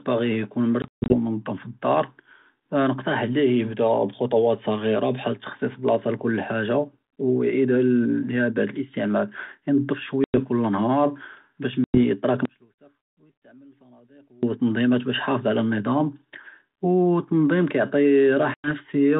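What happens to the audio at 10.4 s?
That moment falls just after packet loss on an ADPCM call, spanning 10.24 to 10.38 s. About 100 ms of audio, a handful of packets, drops to hard-edged silence. The G.726 decoder's predictor and step size then resume out of step with the sender, so speech returns mistracked briefly before settling.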